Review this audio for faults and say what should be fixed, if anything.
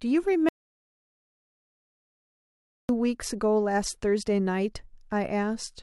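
An audio dropout to silence runs from 0.49 s to 2.89 s: the speech cuts off abruptly, about 2.4 s of material is lost as silence with no room tone, then resumes mid-flow. The likely cause is the input disconnecting or muting while recording continued. Secure cabling and mute controls, and monitor input levels during capture so a lost signal is caught immediately.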